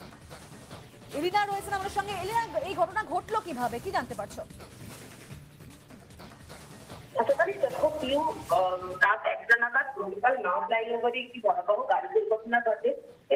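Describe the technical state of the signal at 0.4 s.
At 0.4 s the signal is intact, with no audible fault at that moment.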